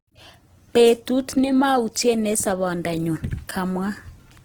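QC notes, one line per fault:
throughout, Opus compression: likely a bit-starved Opus encode in music mode, fitting about 16 kbps; noise-filled bands make the speech grainy and rough, with bandwidth still reaching 20.2 kHz.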